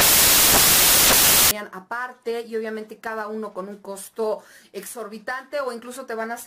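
Right from the start, 0.0 to 1.51 s, you get samples built from the wrong bytes: the reader's pairing up the bytes of each sample wrongly, so the jittery low bits end up as the big part of each value. It comes out as loud, harsh noise, close to white on the louder sounds.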